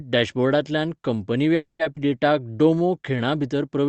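At 1.55 s the speech halts for about a quarter of a second, until 1.81 s. The last sound carries on briefly as a fading buzz or hiss, then about 150 ms of silence. It resumes where it stopped with nothing lost. This is a call audio freeze, likely from packets held up in transit draining the jitter buffer. That inserted gap separates it from a dropout that removes material.

At 1.95 s the opposite happens: a skip ahead. Roughly a tenth of a second of speech is discarded and playback jumps forward, bridged by only about 10 ms, so the two sides butt together almost seamlessly. Unlike the freeze, nothing pauses; material is missing instead.

From 2.33 to 3.17 s a jitter buffer slow-down stretches the speech by about 101 ms, running at roughly 89% speed. Single pitch periods and pause fragments are repeated to rebuild the buffer's reserve. Pitch stays unchanged while sounds drag, which separates it from a simple playback-rate error that would lower the pitch. 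Throughout, the Opus call path confines the audio to an 8 kHz band.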